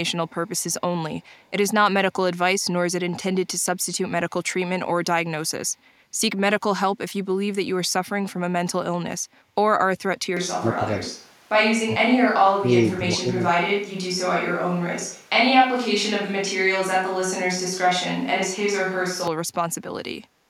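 Between 0.47 and 0.73 s, and again from 1.21 to 1.5 s, a faint delayed copy of the speech trails the talker by about 276 ms, sitting roughly 40 dB below the direct voice. This is an echo leak. The far end is likely playing the call over a loudspeaker, and its echo canceller let part of what its microphone caught slip through and return down the line.

At 10.37 s the voice abruptly turns hollow and roomy, losing bass. The overall level barely changes, but a bed of room noise appears about 30 dB under the speech. It stays this way until 19.28 s, then snaps back. This is a switch to a distant microphone: the close microphone's feed likely dropped out or was skipped, leaving a pickup farther away to carry the voice, with more room reflections and background noise.

Inside that stretch the talker's voice sinks three times. From 10.58 to 11.08 s it drops by about 20 dB. From 11.83 to 12.16 s it falls by about 35 dB, and from 12.43 to 13.75 s it does so again. 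This is speech suppressed in double talk. With both sides talking at once, the echo canceller likely mistook the local voice for loudspeaker echo and attenuated it along with the echo.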